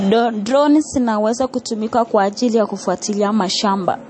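The audio was likely squeezed through MP3 compression at a very low bitrate, with damage consistent with something around 36 kbps, and it affects the whole clip from start to finish. Starved of bits, the encoder discarded everything above 8.4 kHz and dropped weaker frequency lines, letting them flicker in and out between frames. The speech therefore sounds dull and band-limited, with a plainly audible watery, swirling texture, metallic chirping on sibilants and softened onsets.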